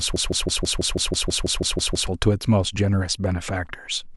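Already under way at 0.00 s and lasting to 2.07 s, a broken-record loop repeats one 0.16 s fragment 12 times back to back, likely a stalled player or stream resending its last buffer. The waveform shows identical tiled blocks, and the spectrogram shows a pattern stamped every 0.16 s.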